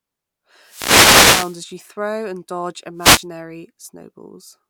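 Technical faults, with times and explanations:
0.62–1.63 s and 2.97–3.26 s: wireless microphone noise hits, heard as bursts of static swishing over the speech. Reflections of the FM radio signal cancel at the receiver, the signal fades, and receiver noise rises. The first is roughly a second long.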